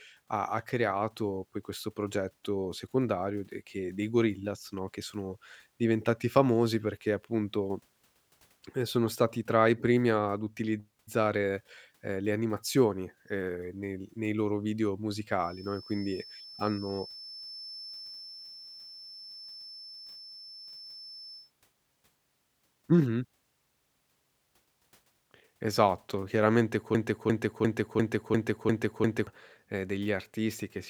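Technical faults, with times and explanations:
15.33 to 21.52 s, feedback whistle. Just after "nel nei loro video", a thin, steady tone at about 5.3 kHz rises behind the speech and holds for roughly six seconds. It sits well below the speech level and swells and fades slowly in loudness. The likely cause is a loudspeaker-to-microphone loop balanced right at the edge of feedback. One frequency keeps ringing but never builds into a full howl, so it stays a quiet, persistent whistle.
26.95 to 29.27 s, broken-record loop. A fragment of about 0.35 s repeats exactly, back to back, seven times. Each pass is identical, so the speech stutters mechanically instead of moving forward. This likely comes from a stalled player, encoder or stream that kept sending the last fragment in its buffer. Whatever speech should have played during those two-plus seconds is missing.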